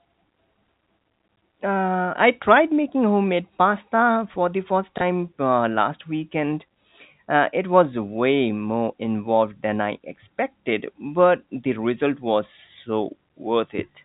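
At 4.98 to 5.01 s, just after "pasta for the first" and before "uh last weekend", there is packet loss with the last packet repeated. About 30 ms of audio went missing, which fits a single lost 30 ms packet, and the receiver filled the gap by replaying the previous chunk. The single repeat sounds like a small blip that interrupts the speech. The G.711 telephone band limit sits beneath it.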